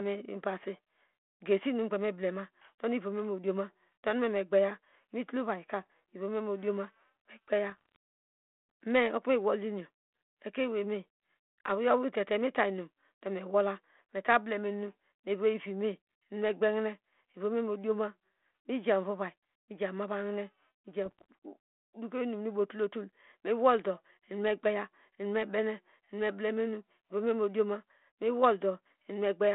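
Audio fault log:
5.83–5.92 s, 7.70–7.96 s and 21.05–21.24 s: bit errors on an ADPCM link. Each burst brings pops, a rough, gritty texture and brief jumps in level, because a flipped bit corrupts the coded difference and also throws off the decoder's adaptive step size and predictor, so the damage rings on for some milliseconds. The first burst is lighter. The later two sound denser, which fits an error rate near half a percent, against the light coding grain of what is likely a 32 kbit/s telephone-band link.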